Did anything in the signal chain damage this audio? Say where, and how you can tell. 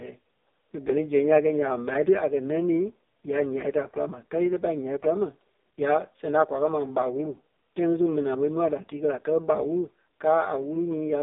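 Yes. The AMR narrowband mobile codec damaged this speech across the whole clip, at the codec stage. Nothing is heard above about 3.8 kHz, and the line band sits at roughly 250 Hz to 3.7 kHz. The voice sounds heavily buzzy and synthetic, which fits the lowest AMR-NB mode of 4.75 kbps. At that rate the vocal tract is rebuilt from a filter model fed by a few pulses per 5 ms subframe.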